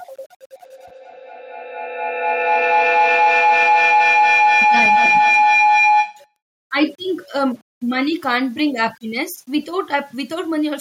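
Throughout, the speech was likely reduced to a low bit depth without dither, rounding to roughly 8-bit steps, so a gritty, signal-following grain sits around 35 dB below the voice. From 0.56 to 6.38 s, a feedback howl builds as a microphone-to-loudspeaker loop regains level each pass. It narrows to a tone around 1 kHz, with the loop repeating roughly every 200 ms and peaking about 5 dB above the speech.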